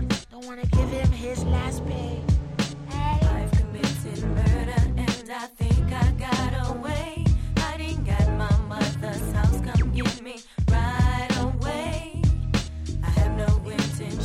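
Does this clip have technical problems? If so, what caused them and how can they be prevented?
No technical faults are audible.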